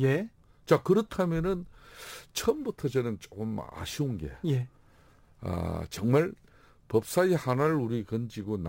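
Throughout, imaging from sample-and-hold upsampling repeats samples without smoothing. It mirrors speech into 12 to 24 kHz as a metallic fizz about 26 dB down, whose level follows the speech.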